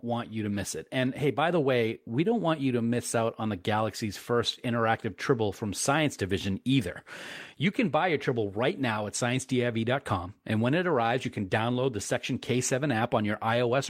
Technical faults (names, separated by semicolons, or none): none